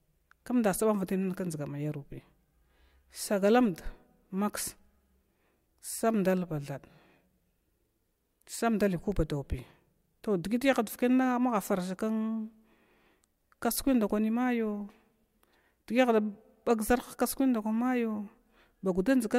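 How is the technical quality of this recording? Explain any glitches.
No glitches can be heard anywhere in the recording. The speech runs without technical disruption at any point.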